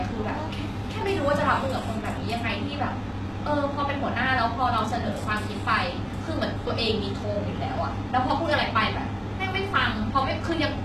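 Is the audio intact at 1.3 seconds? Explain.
No. Throughout the speech, including at 1.3 s, there is plainly audible damage from likely HE-AAC compression. Treble up to a 12.3 kHz ceiling is rebuilt from copied lower bands, so s sounds turn gritty and lispy. A simple low-pass would sound dull instead. The damage fits a bitrate near 16 kbps.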